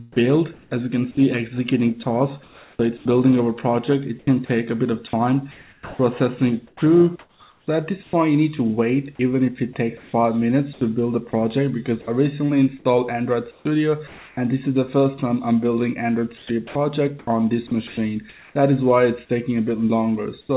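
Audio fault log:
0.53–0.71 s and 20.41–20.49 s, comfort noise in place of the background: The real background, about 36 dB and 33 dB below the loudest passages, is replaced for 180 ms and then 80 ms by a smooth, detail-free hiss. In the first gap it is about 2 dB quieter; in the second the level is unchanged. This is likely discontinuous transmission, with the receiver filling the silence with synthetic noise roughly matched to the background's spectrum.
0.68 s, onset clipped by the voice detector: The sound's first 30 ms are missing, so it begins hard, without its gradual attack, emerging directly out of the synthetic hiss of the preceding gap. The likely cause is the sender's activity detector reacting late to the returning signal. The opening was never transmitted, and comfort noise covered the lost start. In the background, the band stops at 4 kHz, which fits a narrowband G.711-type call codec.
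2.43–8.13 s, 9.97–12.07 s, 13.51–14.37 s, 16.37–18.55 s, sound chopped by the voice detector: In these four stretches, quiet portions and edges drop out repeatedly, totalling 1.76 s, 320 ms, 440 ms and 680 ms. The result is choppy and uneven. The likely mechanism is the sender's detector toggling transmission on and off as the level hovers near its threshold, with comfort noise filling every off period.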